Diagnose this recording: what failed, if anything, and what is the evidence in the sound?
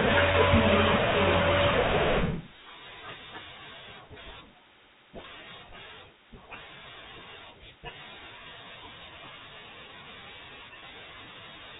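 The failure is at the network stage: packet loss with pitch repetition at 0.32–0.34 s, 5.22–5.24 s and 10.80–10.82 s. Each gap spans 20 ms, which fits one lost packet at a time. In each, the receiver's concealment loops the last pitch period across the hole, so the speech briefly holds on a slightly buzzy, sustained tone before normal audio resumes. The G.711 telephone coding underneath limits the band to 4 kHz.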